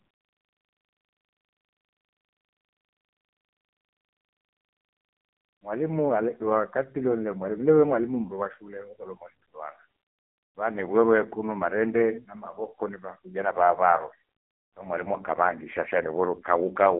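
Throughout, the speech passes through an AMR narrowband mobile codec, heavily damaged and buzzy-synthetic in a way that fits its lowest modes, near 5.15 kbps. A spectrogram shows a hard ceiling at 3.5 kHz and thin energy below 200 Hz, a phone-line band.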